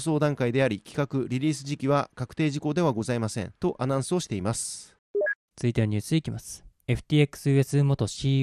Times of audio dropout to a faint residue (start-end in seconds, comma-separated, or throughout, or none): none